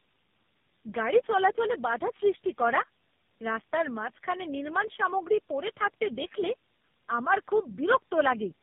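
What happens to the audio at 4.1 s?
At 4.1 s you're hearing tandem speech coding, which runs through the whole clip. The speech sounds like it went through three narrowband coders in a row, each recoding the last one's damage. Nothing survives above 3.6 kHz, so it comes out muffled, rough and warbly.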